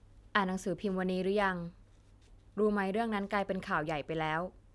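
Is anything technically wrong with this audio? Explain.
No, no technical faults heard.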